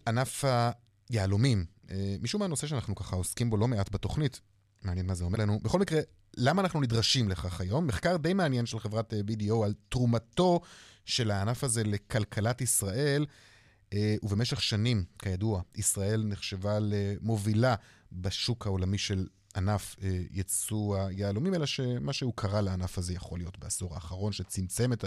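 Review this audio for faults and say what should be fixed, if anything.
At 5.32 to 5.37 s there's damaged data in the compressed stream, a glitch of about 50 ms in the speech. Some bytes there got corrupted, so the decoder misread or dropped those frames, lost sync and had to hunt for the next valid frame header. To prevent it, pull a clean copy from the source and verify transfers with checksums so corrupted bytes never reach the decoder.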